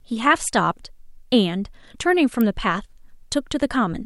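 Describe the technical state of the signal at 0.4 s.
At 0.4 s the speech signal is intact, with no audible fault at that moment.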